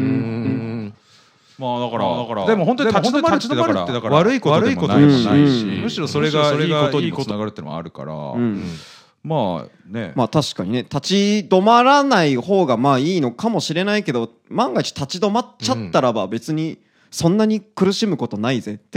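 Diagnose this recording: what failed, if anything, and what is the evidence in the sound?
There's a doubled audio track from 0.45 to 7.31 s: an equal-level copy trails about 400 ms behind with no decay, likely from a second, slower capture path.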